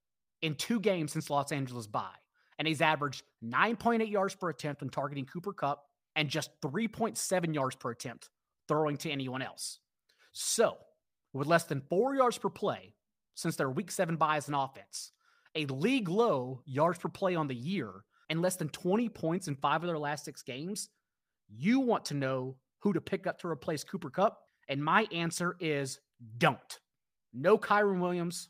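Nothing stood out on listening to this speech recording.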